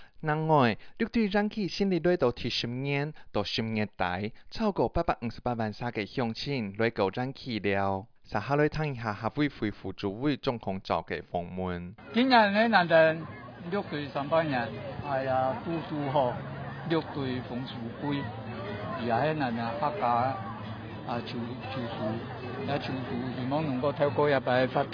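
No technical faults can be heard anywhere in this audio.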